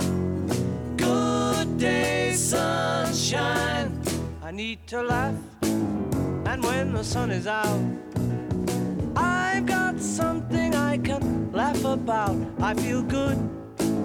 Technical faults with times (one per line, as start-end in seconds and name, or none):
none